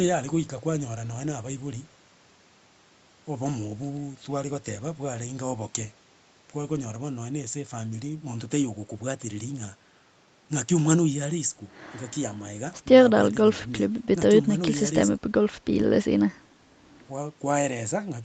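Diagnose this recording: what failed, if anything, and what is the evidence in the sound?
Nothing has failed: the speech carries only the expected marks of a call route, with the microphone processing's high-pass trimming the deepest bass and the call codec limiting the band to nothing above 8 kHz, both normal for this path.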